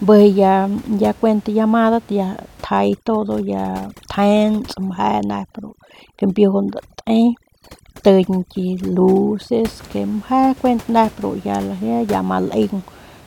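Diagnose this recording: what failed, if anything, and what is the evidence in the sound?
From 2.65 s to 9.68 s the pauses drop to near silence sprinkled with twinkling specks. This is overdone noise removal in the call processing stage: bands near the noise estimate are cut hard, taking quiet speech detail with them, while room noise sits about 24 dB below the speech.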